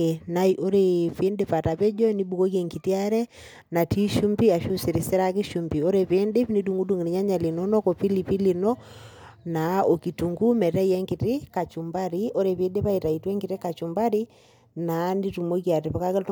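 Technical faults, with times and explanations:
Nothing technical to flag in this speech recording; I couldn't hear a single fault anywhere in it.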